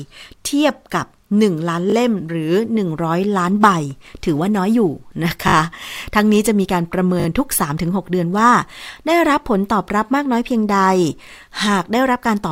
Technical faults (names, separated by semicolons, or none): repeated buffer